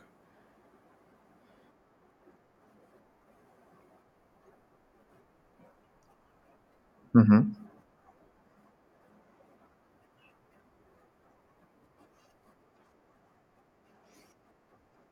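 Speech with compressed frames skipped at 12.56 s: the audio jumps ahead by about 30 ms, roughly one frame (fitting a 32 ms codec frame). A spectrogram shows a break in the harmonic pattern at that point.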